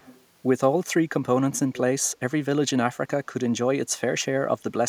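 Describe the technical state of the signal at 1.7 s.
A faint, delayed copy of the speech, about 20 dB down and 435 ms late, surfaces from 1.74 to 1.78 s: an echo leak, likely from a far-end echo canceller failing to suppress loudspeaker pickup.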